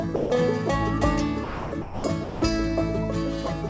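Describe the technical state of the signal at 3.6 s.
At 3.68 to 3.70 s, the final 21 ms of sound gives way to steady noise or near silence. This is likely sound dropped by the voice detector, with comfort noise filling the gap.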